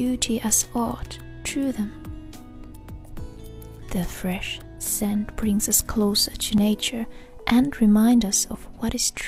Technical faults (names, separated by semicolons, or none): overlap between stream segments